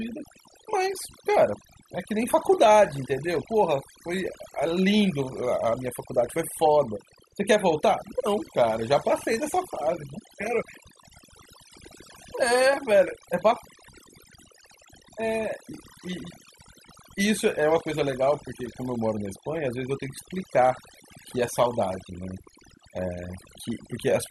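Throughout the clip, the speech shows overdone noise removal. A noise reduction process was pushed too hard on a noisy recording. It drives individual frequency bands down, or off entirely, whenever they sit close to its noise estimate. Quieter parts of the voice fall below that line and vanish with the noise. The background collapses to near silence, dotted with twinkling specks.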